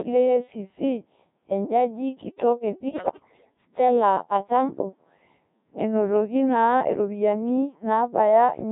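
From the start and throughout, the speech has the robotic, buzzy character of the Codec 2 vocoder, heavily damaged, at a rate that fits about 1.3 kbit/s. Only pitch, voicing, energy and a coarse spectral envelope survive, and the decoder rebuilds each frame from sine waves, so the original waveform is gone. On a spectrogram the harmonics look unnaturally regular and smeared, with the fine detail between formants missing. The waveform looks periodic and synthetic.

From 2.89 s to 3.54 s, right after "ejaji kitok e", bit errors on digital voice radio corrupt the stream, at an error rate of around 7 percent. At such a low bitrate every flipped bit corrupts the pitch, level, voicing or spectrum of a whole frame. The sound jumps into warbling bleeps and gibberish. The spectrogram shows harmonic stacks leaping up and down in blocky frame-sized steps, and the waveform's envelope lurches abruptly.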